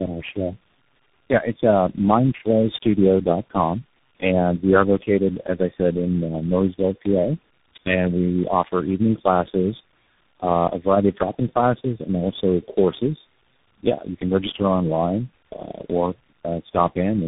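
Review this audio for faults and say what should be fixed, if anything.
Tandem speech coding runs throughout: the speech is rough, muffled and warbly, with nothing above 3.8 kHz. The artefacts point to about four speech coders in a row, ending in a CVSD-like stage, each re-encoding the previous one's already damaged output. To prevent it, keep the call in a single codec end to end, or pass the coded stream through transcoder-free between links.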